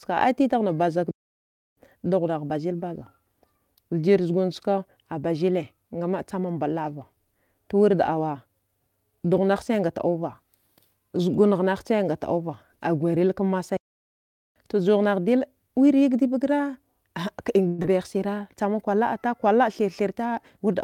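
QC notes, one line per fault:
1.11–1.77 s and 13.77–14.56 s, playback stall: the speech cuts to silence for 0.66 s and 0.79 s, then resumes where it stopped, likely a starved or blocked player rather than lost data.
17.67–17.86 s, long network dropout: a fading buzz fills about 165 ms with no true silence, and about 80 ms of speech is skipped, likely because packets never arrived.
19.81–20.76 s, jitter buffer speed-up: the speech runs 4% faster at unchanged pitch as roughly 50 ms of excess buffered delay is trimmed away, unlike a stall's gap.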